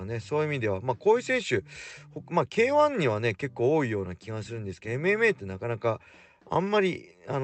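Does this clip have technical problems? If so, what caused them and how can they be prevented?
No, the speech shows no technical problems: it has passed through a WebRTC call path, and the Opus coding leaves only its ordinary character, with the audio band extending up to 8 kHz.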